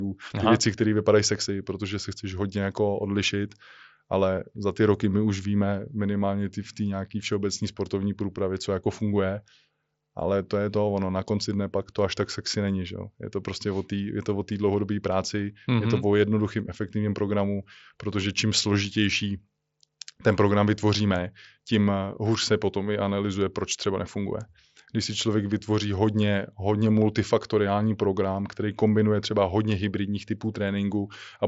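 No technical faults turn up in the speech, which comes through a wideband Bluetooth mSBC headset codec with no content above about 7.7 kHz.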